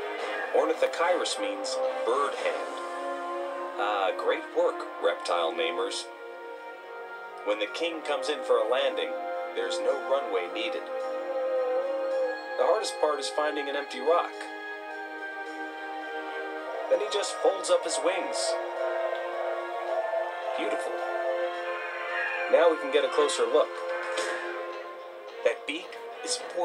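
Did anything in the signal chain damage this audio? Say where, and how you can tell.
No, nothing stood out on listening that would point to damage at any stage of the signal chain.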